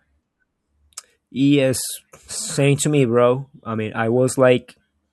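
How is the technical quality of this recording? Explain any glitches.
Nothing in this speech recording catches the ear as a technical problem, so there aren't any glitches to explain.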